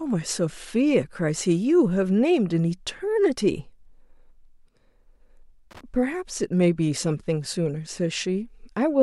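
A speech recording with a short loose connector crackle from 5.71 to 5.81 s, a burst of irregular scratching about 0.1 s long. The sound comes from a contact in the signal path that is intermittently making and breaking: each break chops the audio, and the abrupt interruptions produce the rough, uneven crackle heard here. A worn or dirty plug or jack being disturbed is the most plausible source.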